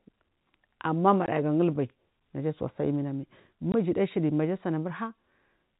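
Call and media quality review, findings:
Packet loss filled with silence, 1.26–1.28 s: 20 ms hard dropout, just before "gulbai naja asuwa sa'a". One lost packet at a 20 ms frame size, gap zero-filled rather than concealed. Probable component: receiver jitter buffer / PLC.
Same fault, 3.72–3.74 s: identical 20 ms silent hole, just after "naja asuwa sa'a eminamai". Points to missing loss concealment. The G.711 telephone band, cut at 4 kHz, is clean around both gaps.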